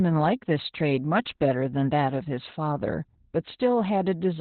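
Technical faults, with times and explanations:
Throughout: Opus voice compression. Nothing remains above 4.2 kHz, so the speech is boxed into a narrow, telephone-like band. The linear-prediction coder's coarse excitation adds hoarse, faintly robotic grain, which fits about 8 kbps and sets it apart from a clean low-pass filter.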